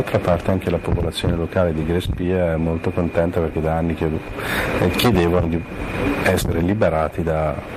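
Nothing stood out as a technical problem on listening to this clip.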